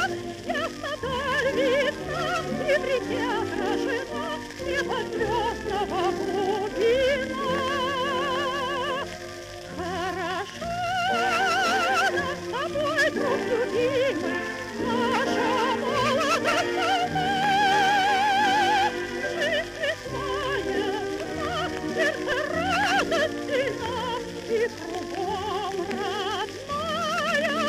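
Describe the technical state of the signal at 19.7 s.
At 19.7 s the signal is intact, with no audible dropout, distortion, clipping or other fault at that moment.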